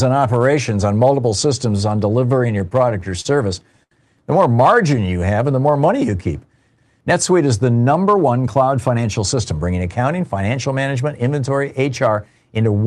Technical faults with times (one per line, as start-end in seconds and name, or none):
2.28-3.27 repeated stalls (stutter)
3.83-3.93 short stall from a late packet
4.62-6.18 jitter buffer slow-down
8.09-9.81 jitter buffer speed-up